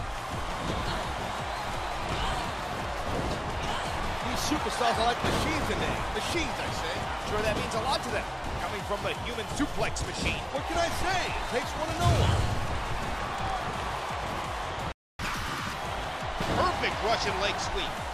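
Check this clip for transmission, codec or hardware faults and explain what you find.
Two playback faults occur close together, both near the end of the clip.

A playback stall runs from 14.92 to 15.19 s. The player was likely starved of data or had its output thread blocked, so nothing reached the output for about 270 ms. The sound cuts off abruptly in mid-flow, leaving a gap of silence before it resumes.

Catch-up at higher speed follows immediately, from 15.19 to 15.73 s. To recover the lost time, the player resamples its backlog at 1.5 times normal rate. Speed and pitch rise together, roughly seven semitones higher, before the sound settles back to normal.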